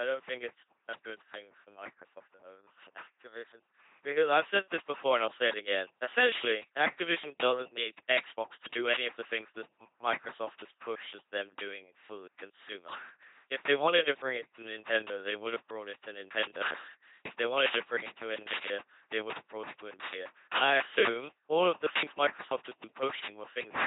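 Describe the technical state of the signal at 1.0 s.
LPC-10 vocoder damage is present at 1.0 s, as it is across the whole clip. The speech has been rebuilt from a short all-pole model of the vocal tract, excited moment by moment by either a pulse train or noise, never a mix. That gives the heavy buzzing, robotic quality and stray hiss or buzz where voicing is misjudged, which fits a 2.4 kbit/s coder. Nothing remains above 3.8 kHz.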